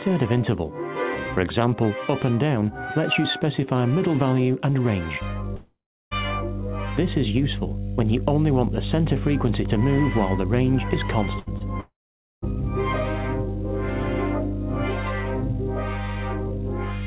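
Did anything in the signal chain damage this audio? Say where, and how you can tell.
Yes. In the analogue wiring, a ground loop or a nearby transformer has coupled the 50 Hz power line into the signal from 5.21 s to the end. It holds as a steady low tone with some low harmonics. It is loud, roughly level with the wanted sound, so it sits underneath everything that follows and muddies the low end.

Two long network dropouts, likely from the network, left stretches where no audio arrived: 5.56 to 6.13 s and 11.80 to 12.44 s. In each, the receiver stretches the last sound into a fading buzz or hiss, which then gives way to silence under the hum, about 0.36 s the first time and 0.5 s the second. The audio then resumes further on, with the lost stretch simply gone.

At 11.39 to 11.48 s, a burst of packet loss on the network removed about 80 ms. The receiver fills the gap by holding the last sound and turning it down, so a brief held buzz or fading hiss replaces the missing audio. 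The sound then picks up again slightly further along, with the part in between missing and the continuity visibly broken.

Shortly after, at 11.58 to 11.62 s, a short concealed packet loss dropped about 20 ms before the decoder could use it. The receiver extrapolated from the preceding sound and cross-faded back into the real audio. This leaves a quick smear or wobble rather than a clear gap, all within the band of the G.711 mu-law call path, which has nothing above 4 kHz, consistent with a 64 kbps stream.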